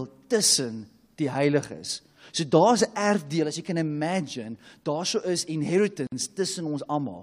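A gap at a join of encoded pieces opens from 6.07 to 6.12 s: about 52 ms of silence cuts into the speech. Two separately encoded segments were joined without trimming the start delay and end padding. Its edges are smeared by the codec, and the speech resumes where it stopped.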